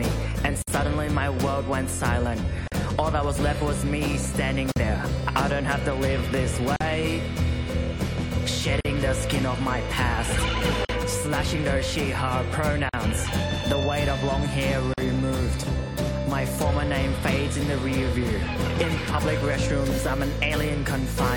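Short dropouts hit at 0.62, 2.68, 4.72, 6.76, 8.81, 10.85, 12.89 and 14.94 s, a classic gap at a join of encoded pieces. The audio was evidently encoded in chunks about 2 s long and butted together untrimmed, so encoder start-up delay and last-frame padding leave silence at each seam: about 55 ms the first time, then about 43 ms. Each one is an abrupt hole with smeared edges, and the sound resumes right where it left off.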